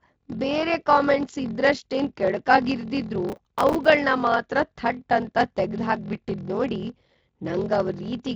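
A block size mismatch (padded) runs throughout: one stage hands over blocks shorter than the next stage reads, which fits a 1024-sample read, and zeros fill each remainder. The speech carries a 43.1 Hz buzz from those regular gaps and plays at 0.861 times normal speed, with pitch largely unchanged.

From 3.29 to 3.86 s, just after "ಕೆಡುಕಾಗ್ ಇರ್ದಿದ್ರೂ", there is processor overload crackle. Around twenty buffers of about 5 ms each miss their deadlines over that stretch, and each miss repeats a scrap of old audio with hard edges. Through the Speex codec's light, band-limited rendering, this comes through as a gritty tearing crackle laid over the speech.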